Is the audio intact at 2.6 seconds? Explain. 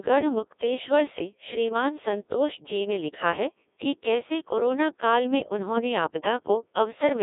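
No. At 2.6 s, as across the whole clip, the speech passes through a Codec 2 vocoder. It is rebuilt from pitch, voicing and a spectral envelope, which fits a rate near 1.6 kbit/s. The result is heavily robotic and buzzy, confined to about 250 Hz–3.7 kHz, with nothing above 3.8 kHz. A plain telephone band-limit would keep the original waveform and sound muffled but natural, not synthetic.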